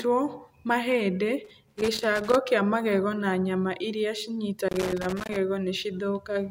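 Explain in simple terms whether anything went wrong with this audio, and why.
A worn or dirty plug or socket in the recording chain was making and losing contact as it shifted. This loose connector crackle chops the sound on and off very quickly, so you hear bursts of irregular scratching. It happens from 1.45 to 2.35 s, just before "kĩa magego na nyama", and again from 4.69 to 5.36 s, right after "magego na nyama iria".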